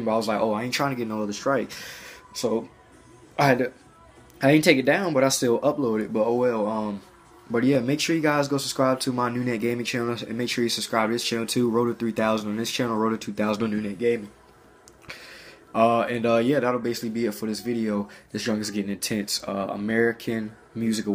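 Two sharp clicks sound at 7.75 s and 13.68 s. Each is likely dropped samples, well under a millisecond lost, making the waveform jump.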